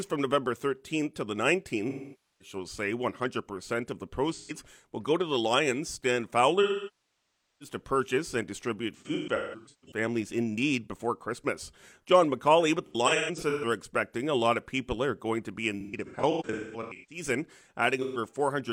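AAC frame loss with concealment occurs seven times: 1.89–2.56 s, 4.34–4.52 s, 6.62–7.75 s, 8.97–9.97 s, 12.86–13.65 s, 15.81–17.23 s and 18.02–18.17 s. Each time the decoder rebuilds the missing audio from the last good spectrum. The brief gaps of about 0.13 s sound like smeared, noisy or phasey patches. The near one-second loss at 6.62 s decays toward silence and fades back in. The 8.97 s, 12.86 s and 15.81 s episodes are scattered dropouts with runs up to about 150–200 ms.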